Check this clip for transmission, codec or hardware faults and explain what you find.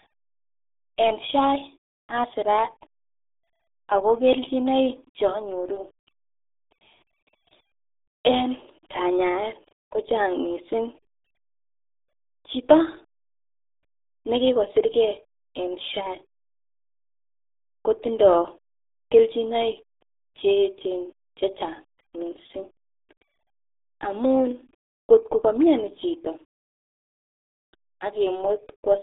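One codec fault affects the entire clip. Throughout, the speech sounds muffled and gargly within a narrow 250 Hz to 3.6 kHz band, and nothing above 3.8 kHz survives. This is heavy RealAudio 14.4 codec damage, consistent with an 8 kbit/s dial-up speech codec.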